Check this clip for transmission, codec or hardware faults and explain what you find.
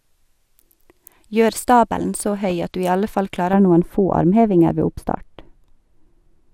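Two faults turn up: a brief reception glitch and a lasting treble loss.

At 2.50 s there's a quick burst of DAB burbling. Weak reception let bit errors slip past the error correction into the MP2 data, so wrong samples put short blips of noise into single sub-bands. You hear a short burst of noise blips on the speech.

From 3.53 s to the end, de-emphasis was applied wrongly. A treble cut meant to undo pre-emphasis hit audio that had none, or was applied twice, tilting the response smoothly down to about 11 dB lower at 10 kHz than at 1 kHz. The speech goes dull and muffled.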